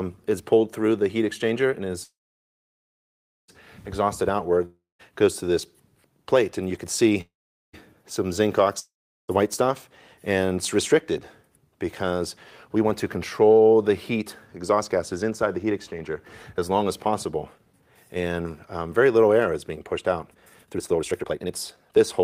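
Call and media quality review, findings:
Call audio freeze at 2.03–3.50 s and 7.21–7.75 s. The last sound is extended as a fading buzz, then silence for about 1.35 s and 0.43 s. Audio resumes where it stopped, with nothing lost and delay added. Likely cause: jitter buffer ran empty while packets were held up. Waveform: flat gap. Spectrogram: smeared tail, then blank.

Long network dropout at 4.65–5.01 s and 8.79–9.30 s. A decaying fill is followed by silence of about 0.17 s and 0.38 s. Audio returns further on, skipping about 0.34 s and 0.94 s; the second dropout cuts delay by roughly half a second. Likely cause: packet loss. Spectrogram: hard discontinuity at resume.

Jitter buffer speed-up at 12.76–18.17 s (105%, roughly 0.3 s removed) and 20.34 s to the end (137%, roughly 0.7 s removed). Pitch is unchanged and the second stretch sounds clearly hurried. Likely cause: repeated pitch-period cuts to drain an overfull buffer. 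Waveform: compressed periodicity, no gaps.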